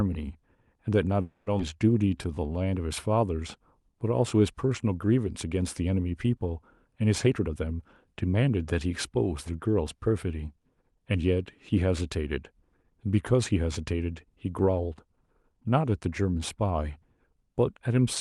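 From 1.21 to 1.48 s the speech stops and the last sound carries on for about 250 ms as a fading buzz before the speech resumes where it left off. This is a call audio freeze, likely from packets held up in transit while the jitter buffer ran dry. Nothing is lost, but the playout delay grows by 250 ms.

Just after, at 1.58 to 1.61 s, comes a skip ahead. Roughly 150 ms of speech is dropped and the two sides are joined with only a 10 ms bridge, so the audio lurches forward. This claws back most of the delay added by the freeze.

From 1.98 to 2.71 s a jitter buffer slow-down repeats pitch periods to rebuild the buffer's reserve. It adds 149 ms, so the speech plays at 81% speed at unchanged pitch, with drawn-out sounds.

Between 7.26 and 8.86 s a jitter buffer speed-up trims short pitch-period pieces, about 300 ms in total, to cut excess delay. The speech runs at 116% speed, sounding hurried but at the same pitch. 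The Opus call path behind all this limits the audio to 12 kHz.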